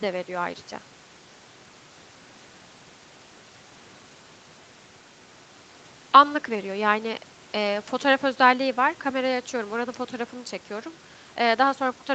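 Nothing stood out on listening to this speech, which carries the expected call-path band limit, with nothing above about 8 kHz.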